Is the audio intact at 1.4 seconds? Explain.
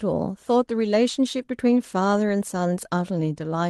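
No. From 1.41 to 1.43 s, one 20 ms packet was lost and then rebuilt from error correction: the following packet carried a low-bitrate copy, which the decoder played. There is no gap, just a brief rougher, noisier patch. Right after, from 1.45 to 1.49 s, comes a short concealed packet loss. About 20 ms never arrived in time, and roughly 15 ms was invented by extending the preceding sound before blending back. Unlike the rebuilt frame, that part is guessed rather than coded, so it comes across as a small smear or wobble, not added grain.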